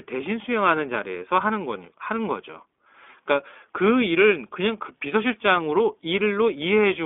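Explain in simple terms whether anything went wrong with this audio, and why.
The speech sounds thin and boxed-in from start to finish, like a phone call, with a slightly rough, synthetic edge you can plainly hear. That comes from the iLBC codec, a narrowband phone-call coder. It keeps only roughly 250 Hz to 3.5 kHz, so the deep body and the crisp high detail are gone, and it rebuilds the sound in separate 20 ms slices, each coded on its own. That piecewise rebuilding gives the voice its buzzy, artificial quality.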